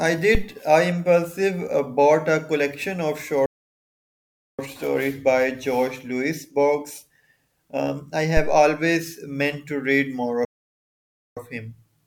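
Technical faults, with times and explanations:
0.35–0.48 s and 8.37–8.67 s, phantom power thump: two deep low thumps land here, the first dying away in roughly 28 ms and the second hanging on longer at about 67 ms. That's the signature of phantom power or some other supply switching on a live input. The sudden voltage step pushes straight through the coupling capacitors and comes out as a low-frequency pulse rather than anything resembling the speech.
3.46–4.59 s and 10.45–11.37 s, playback stall: the speech cuts out mid-flow for about 1.13 s the first time and about 0.92 s the second, then picks back up. Silent gaps like these that break off the sound and resume are most likely the player running dry of data or having its thread blocked, so nothing reaches the output until it recovers and starts feeding audio again.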